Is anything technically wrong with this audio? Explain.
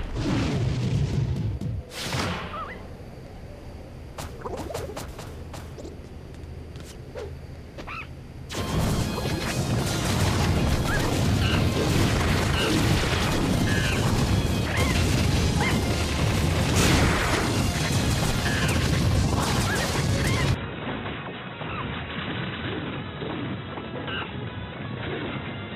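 Yes. From 20.54 s to the end, the input likely switched to a poorer device. The narrower band cuts everything above 3.9 kHz, so the audio turns dull, drops about 5 dB, and gains a faint new noise floor, with no gap at the switch.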